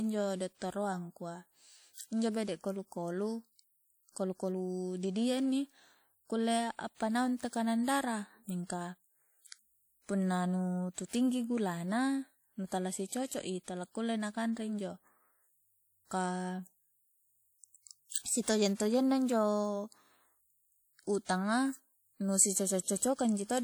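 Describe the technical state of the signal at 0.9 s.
At 0.9 s the speech carries plainly audible coding damage, and it runs through the whole clip. The likely cause is WMA compression, at a rate that fits about 48 kbps. A transform codec like this quantises long blocks, so its noise smears across tens of milliseconds around each sound. The result is a ringing, washy texture and a hiss that rises and falls with the speech. Content reaches up to about 20.1 kHz.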